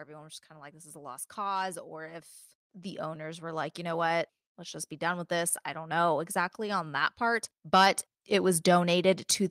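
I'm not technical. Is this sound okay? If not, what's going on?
No. Automatic gain rising runs from 0.05 s to the end: the recording's automatic volume control judged the input too quiet and kept turning itself up, so the speech and the background noise behind it swell louder together throughout.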